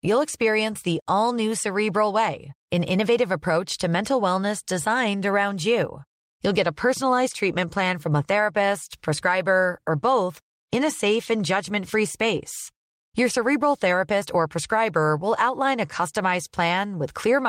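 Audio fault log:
No faults found in this speech.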